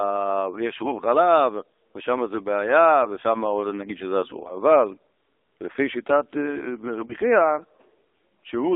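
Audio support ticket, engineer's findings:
AMR narrowband mobile codec, whole clip: speech squeezed through the AMR-NB low-rate vocal-tract model. Band limited to roughly 300 Hz to 3.7 kHz, plainly audible buzzy, synthetic coloration consistent with the 7.4 kbps mode. Nothing above 4 kHz survives.

Lost AMR speech frames, 7.06–7.14 s: decoder concealment after a failed checksum, repeating the last pitch and vocal tract settings at reduced gain. Brief dip or warble in the speech, consistent with a single lost 20 ms frame. Recovery briefly weak or rough.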